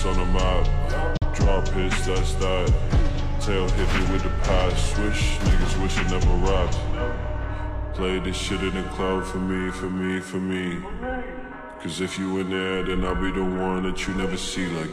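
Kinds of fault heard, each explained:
Digital broadcast dropout: At 1.17 s the sound fades out within about 3 ms and stays silent until 1.26 s, leaving a hole of under a tenth of a second, which fits a single lost frame. The receiver muted after corrupt or missing data, and that stretch is gone.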